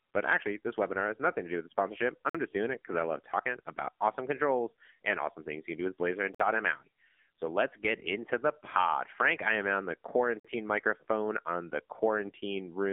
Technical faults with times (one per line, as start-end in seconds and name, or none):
0.00-12.93 AMR narrowband mobile codec
2.30-2.35 gap between chunks
6.35-6.40 gap between chunks
10.40-10.45 gap between chunks